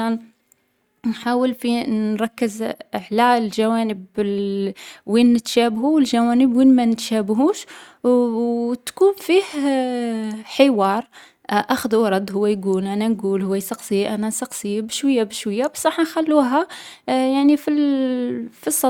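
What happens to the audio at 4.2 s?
At 4.2 s the speech runs on cleanly, with no dropout, click, distortion or other technical fault.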